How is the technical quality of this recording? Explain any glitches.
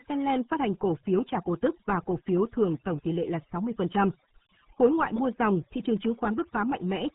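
The technical quality is poor throughout, with two faults stacked across the whole recording.

Overdone noise removal runs from start to finish. A denoiser set far too aggressively switches off individual frequency bands whenever they resemble its noise estimate, taking quiet speech detail with them. Gaps between phrases fall to near silence dotted with twinkling specks. Those isolated chirps set it apart from simple band-limiting.

The RealAudio 14.4 codec damage is also continuous and heavy. Nothing above 3.8 kHz survives, which fits a dial-up-era speech coder running at about 8 kbit/s. The speech sounds muffled and gargly, with a rough, bubbling texture rather than the flickering specks of the denoiser.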